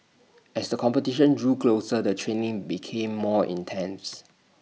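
Nothing is technically wrong with this speech recording.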